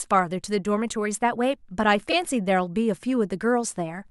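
At 2.10 to 2.13 s, a short run of compressed audio was delivered twice, a repeated-frames fault. The decoder therefore played the same 26.1 ms block a second time, which points to a single duplicated frame. The speech catches for an instant, with one tiny stutter where that sliver of sound repeats. The repeat also adds 26.1 ms to the clip's running time.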